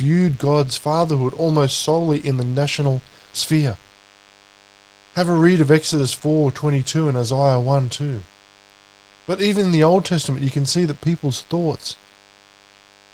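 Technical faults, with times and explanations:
Throughout, DECT cordless phone buzz: a thin, steady buzz at 100 Hz with many harmonics, about 30 dB below the speech. It comes from radio bursts every 10 ms being rectified in the audio circuit. Unlike 50 or 60 Hz mains hum, it sounds edgy and buzzy rather than smooth.
Throughout, Opus voice compression: the speech is plainly hoarse and slightly robotic because the excitation is coded coarsely, which fits a bitrate around 16 kbps in hybrid mode. Unlike narrowband codec damage, the band stays open to about 20 kHz, with a CELT layer carrying the highs.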